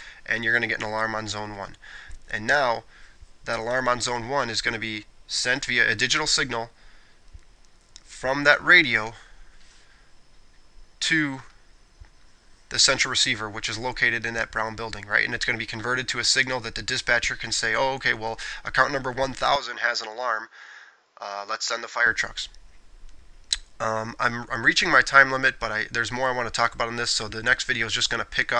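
From 19.56 to 22.06 s sound dulls, likely an input switched to a poorer device: spectrogram empty above 7.3 kHz, waveform about 5 dB lower.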